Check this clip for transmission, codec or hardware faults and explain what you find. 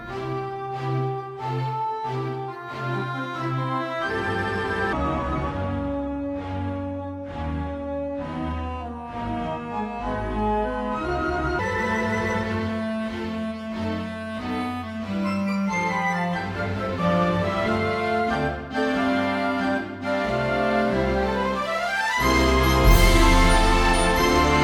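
One fault: a section at the wrong speed. From 4.93 to 11.59 s the audio turns slow and deep, running at 0.718 times normal speed and dropping about five semitones in pitch. Speed and pitch shift together, which points to a likely clock mismatch during editing or playback.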